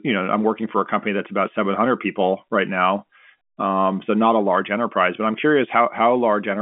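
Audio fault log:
No faults found; the speech carries the expected G.711 telephone character, with a 200 Hz to 3.4 kHz line band and nothing above 3.8 kHz.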